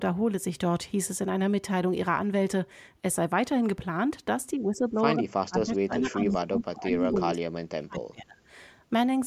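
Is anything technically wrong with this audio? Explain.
Yes, two related faults are audible, both pointing to a struggling echo canceller on a call.

The first is speech suppressed in double talk. From 4.58 to 4.99 s the speech sags by about 10 dB, then from 5.16 to 8.37 s it is pushed down much harder, by as much as about 30 dB, for roughly three seconds. The likely cause is both parties talking at once: the canceller cannot separate the near talker from the loudspeaker echo and attenuates everything. Unlike packet loss, which leaves abrupt silent holes, these are ducked, thinned stretches that follow the overlap.

The second is echo leak, heard four times inside that suppressed stretch: 5.63 to 5.77 s, 5.97 to 6.08 s, 6.29 to 6.38 s and 7.0 to 7.19 s. Each is a short copy of the speech trailing by a steady 247 ms. The copies sit between about 10 and 25 dB below the main speech. This is likely residual echo the canceller failed to remove from a loudspeaker pickup. 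The fixed delay and discrete repeats set it apart from room reverberation, which smears continuously rather than repeating the sound.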